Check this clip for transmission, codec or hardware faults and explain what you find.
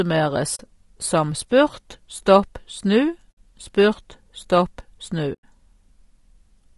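Two faults are audible: low-delay AAC compression throughout the speech, and three short muted dropouts from AAC frame loss.

Throughout the clip the voice sounds rough and grainy, with noise in the gaps between harmonics and a top band that sounds thin or synthetic. The likely cause is AAC-ELD, the low-delay AAC used in video calls. Its short frames resolve pitch harmonics poorly and use bits less efficiently, so at a low rate, which fits around 32 kbps, the harmonic structure breaks up into grit.

At 0.55 to 0.60 s, just before "som spurt", at 3.32 to 3.37 s, just before "spurt stopp snu", and at 5.33 to 5.43 s, just after "spurt stopp snu", the sound fades into a soft-edged hole and back. These are AAC frame loss with muting: the decoder zeroed the spectrum of missing frames, and the overlapping windows smooth the edges. The gaps last about 40, 60 and 100 ms, which fits two, three and five lost frames.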